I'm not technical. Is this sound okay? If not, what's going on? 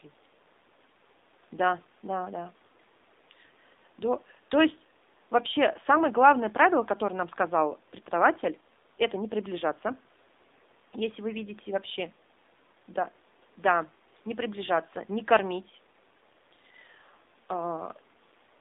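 No. Throughout the clip the speech sounds thin, muffled and somewhat buzzy, like an old phone call. That is the AMR narrowband mobile codec: it keeps only roughly 250 Hz to 3.7 kHz and squeezes the voice hard, leaving a synthetic edge.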